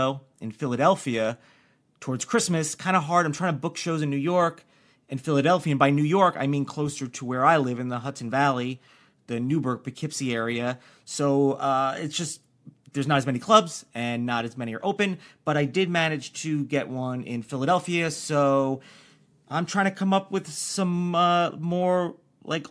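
No audible faults were found anywhere in this speech recording.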